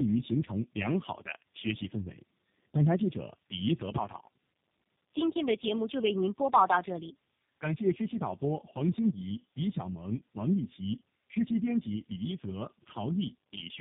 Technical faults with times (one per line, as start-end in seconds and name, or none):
0.00-13.81 tandem speech coding